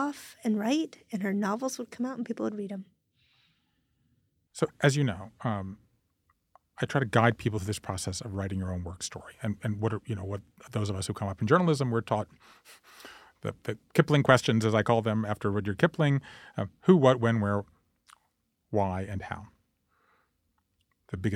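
A speech recording, with nothing technically wrong with it.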